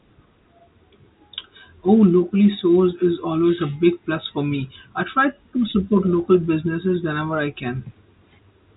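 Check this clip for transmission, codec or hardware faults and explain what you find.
No transmission, codec or hardware faults found; the speech is band-limited with nothing above about 3.8 kHz, consistent with G.711 telephone coding working as intended.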